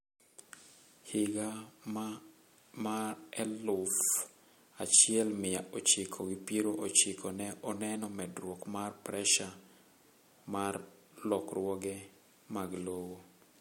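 No technical faults can be heard in this speech recording.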